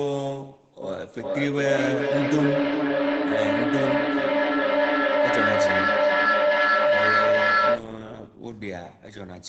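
From 0.82 s to 8.04 s the speech carries feedback echo between two devices. A second device in the same room replays this talker's audio, and its loudspeaker output returns through the first microphone, which the local echo canceller does not remove. Each phrase comes back at an interval of roughly 0.4 s, thinner and ringing within the 8 kHz call band. The loop gain is high: repeats build to about 7 dB above the direct speech instead of fading.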